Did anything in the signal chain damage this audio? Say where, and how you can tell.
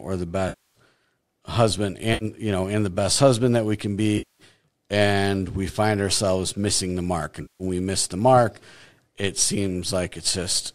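Yes. AAC frame loss with concealment at the network and codec stage damaged the speech at 0.49–0.76 s (260 ms), 2.14–2.25 s (70 ms, just before "you know and the"), 4.18–4.43 s (210 ms, between "husband that we can" and "and we find ourselves"), and 7.42–7.63 s (180 ms, between "ourselves missing the mark" and "we miss the mark"). The decoder fills each gap in from the last good spectrum. A buffer underrun would instead cut to hard silence with clicks. The timing fits 10 ms frames, likely from low-delay AAC.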